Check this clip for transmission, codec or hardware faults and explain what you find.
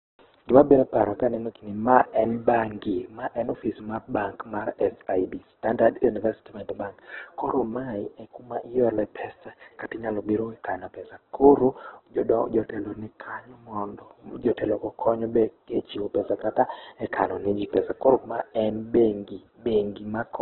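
One fault runs through the whole clip. The speech sounds like heavy Opus compression, likely at a very low rate near 8 kbps. Nothing survives above 4.2 kHz, so the speech is narrowband and muffled. Bands starved of bits are refilled with folded or noisy content. Tones turn noisy, rough and grainy.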